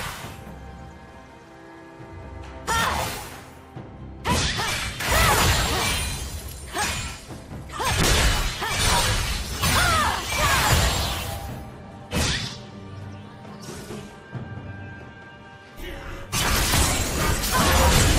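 From 8.02 s to 13.61 s a call bitrate drop takes hold. The sound coarsens and dulls, as if the encoder fell from roughly 64 to 24 kbps, bottoming out for about 4.5 s. On a spectrogram the upper band empties, then refills.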